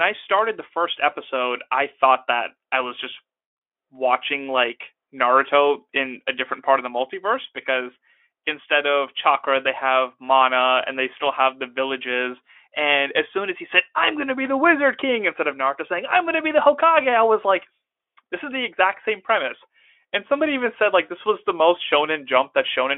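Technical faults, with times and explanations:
Nothing here needs flagging: the speech comes through a Speex link at roughly 18 kbps with a telephone-width band of about 300 Hz to 3.4 kHz, and no technical faults turn up anywhere in it.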